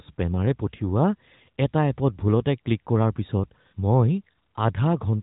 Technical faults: none

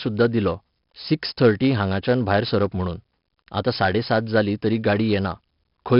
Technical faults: 4-bit ADPCM compression

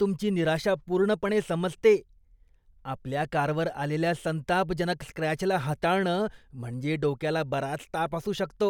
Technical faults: none

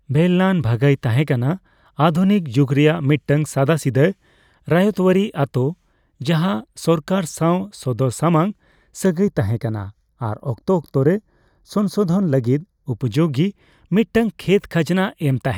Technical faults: channel delay (comb filtering)

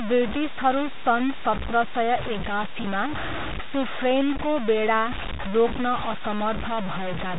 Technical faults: low bit depth without dither; packet loss with pitch repetition

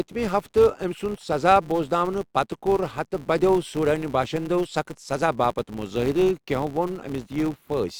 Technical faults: filter restarted on every block

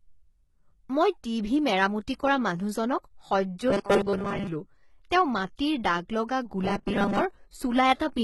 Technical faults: HE-AAC compression; pre-echo; robotic sound from repeated short buffers

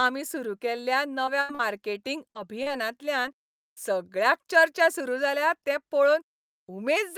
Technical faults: short concealed packet loss; burst of packet loss

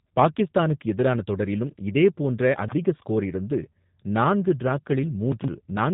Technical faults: G.729 codec; chunks out of order

